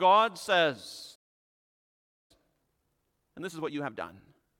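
At 1.15 s the speech just drops out, a playback stall lasting about 1.14 s until 2.31 s. The player most likely ran dry of buffered data or had its thread held up, so nothing reached the output until it got going again.

From 2.31 s to 4.49 s you get time-compressed catch-up. The player trims its backlog by cutting out tiny slices and cross-fading over the joins, so the speech runs at 1.5 times normal speed. Pitch stays put, but it sounds rushed.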